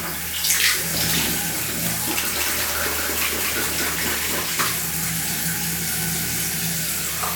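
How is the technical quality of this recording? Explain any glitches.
The recording has one clear glitch, a doubled audio track from 2.37 to 4.43 s. During that span a second, full-band copy of the sound runs about a fifth of a second behind the original, at roughly the same loudness. It is likely caused by the signal being captured twice, once through a slower path. The copy carries no decay or room colour, so every event lands twice like a hard slapback, and the doubling switches on and off abruptly at both edges.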